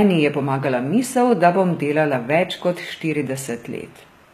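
A speech recording whose treble sounds present but synthetic from start to finish: sibilants come out gritty and metallic, and the upper harmonics don't sit in line with the fuller lower band. That points to HE-AAC compression, likely at a low bitrate around 20 kbps, where spectral band replication copies the lower spectrum upward as a stand-in for the real highs. Unlike a simple low-pass, nothing sounds dull; the brightness is there, just rebuilt and wrong.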